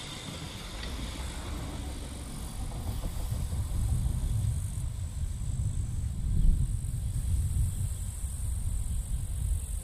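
From 7.14 s to the end, a doubled audio track appears: a second, equally loud full-band copy trails the original by about 200 ms, likely from a slower capture path. It starts abruptly without room colour, and waveform and spectrogram show every onset repeated at that fixed offset.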